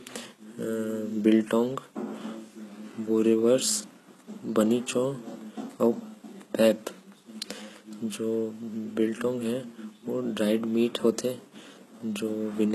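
Throughout the speech, the upper register has a synthetic, metallic sheen: s sounds come out gritty and lisped, and the brightness up top doesn't quite belong to the voice beneath it. This is likely HE-AAC compression, with heavy damage that fits a very low bitrate around 16 kbps. The treble is rebuilt by copying lower bands upward, so harmonics misalign above the crossover. A spectrogram shows smeared, repeated high-band texture and nothing above 12.3 kHz.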